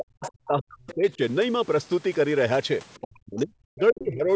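From 0.0 to 1.21 s the speech is pulled down in uneven pieces, about a second of it in total and at worst by around 40 dB. This is speech suppressed in double talk, likely from an echo canceller that could not separate the near talker from loudspeaker echo and ducked both. On a waveform the envelope caves in to near-flat stretches, and a spectrogram shows the harmonics and upper bands thinning or vanishing in blocks.

Inside that span, at 0.25 to 0.30 s and again at 0.89 to 0.94 s, short scraps of the other side's voice leak through, sitting about 15 dB and then about 25 dB below the speech. Echo the canceller failed to remove is the likely cause. They show as smudges of separate harmonic texture, with no matching rise in the main envelope.

The same speech suppressed in double talk returns from 3.01 to 4.3 s, again roughly a second affected and dropping as deep as around 40 dB. The waveform breaks into clipped-short islands, and the spectrogram loses its high end in patches. 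Nothing appears above 8 kHz anywhere.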